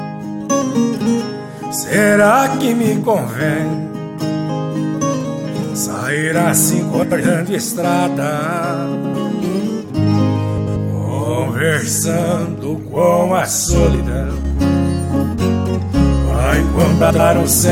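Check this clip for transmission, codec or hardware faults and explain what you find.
Two kinds of fault turn up here.

Frames out of order at 7.02–7.21, 8.95–9.15, 10.57–10.77 and 17.0–17.2 s: two adjacent chunks of roughly 93 ms each get swapped, so you hear a garbled flutter.

Sudden gain jump from 13.95 to 14.45 s: sound and background both drop about 4 dB instantly, then snap back, likely from a gain change applied without any ramp.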